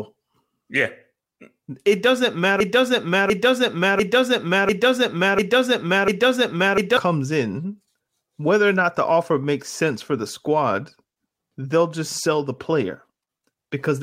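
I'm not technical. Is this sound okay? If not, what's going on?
No. From about 2.60 to 6.97 seconds, the speech gets stuck in a broken-record loop. A short piece, about 0.7 seconds long, plays over and over, six times in a row, with no gap between repeats. This likely happened because the player or stream stalled and kept resending the last bit it had. Whatever should have been said during those four seconds is gone. The speech carries on normally after 6.97 seconds.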